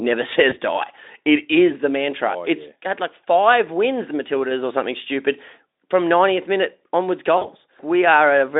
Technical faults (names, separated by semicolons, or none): VoIP packet loss concealed by the speech codec